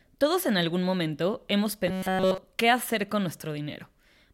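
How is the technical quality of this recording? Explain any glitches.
The recording has one clear glitch. From 1.88 to 2.38 s, about half a second, the speech collapses into a rigid, metallic buzz pitched near 188 Hz. It still loosely tracks the words: robotic sound from repeated short buffers. The likely cause is new audio arriving too slowly, so playback loops a tiny slice, roughly 5.3 ms long, over essentially the whole stretch. That loop rate sets the fixed buzz pitch while the real audio is skipped.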